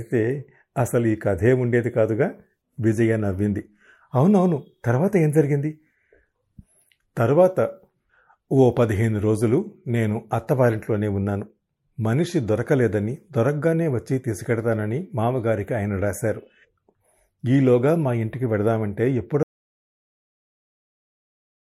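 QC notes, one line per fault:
19.43–21.69 s, audio dropout to silence: the speech cuts off partway through and the last 2.26 s of the clip are dead silence, with no room tone or hiss at all, and it never comes back before the end. That flat nothing suggests the input was likely lost, from a dropped connection, an unplugged device or an accidental mute, while the recorder kept writing silence. Whatever was said in that stretch is simply gone.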